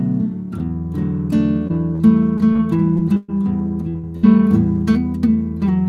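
Repeated packet loss, giving a robotic sound, runs from 1.67 to 3.30 s. Seven separate holes, the longest 119 ms and about 260 ms in all, are each patched by extending the preceding sound, so roughly 15% of this stretch is synthetic and it comes across as choppy.

Short concealed packet loss follows at 3.90 to 3.96 s. About 40 ms of audio never arrived in time, and the receiver bridged it by continuing the last sound before blending back, which leaves a brief smear or wobble where detail drops out.

A burst of packet loss then strikes twice, at 3.98 to 4.05 s and again at 4.17 to 4.25 s, removing about 40 ms and 60 ms respectively. Each time the last sound is held and faded as a buzz or hiss, and the audio resumes with that material missing.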